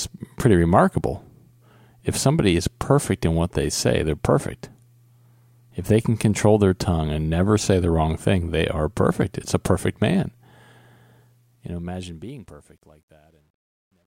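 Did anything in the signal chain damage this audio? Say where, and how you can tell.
Yes. The fade-out stage requantised without dither, at a resolution consistent with about 11 bits, so truncation distortion on a fade starts at 11.16 s. As the speech decays, the waveform collapses into coarse steps, sounding gritty, worst from 12.49 to 14.07 s.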